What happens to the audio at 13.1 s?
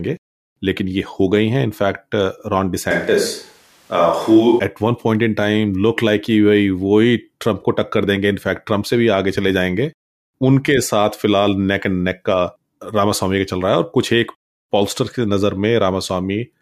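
Nothing goes wrong at 13.1 s; the audio is intact at that moment, with no dropout, click, distortion or other fault.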